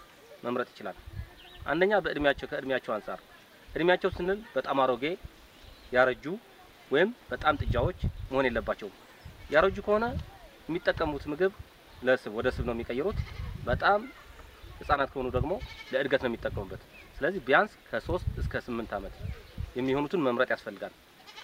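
At 14.94 s the level falls abruptly by about 6 dB and recovers at 15.00 s, a brief dip of roughly 60 ms. The sudden step down and back up, with no fade, is the signature of one channel dropping out. The likely cause is that one side of the stereo signal was lost for that moment. Content shared by both channels loses half its contribution to the mono sum, and anything present only in the missing channel vanishes for the duration.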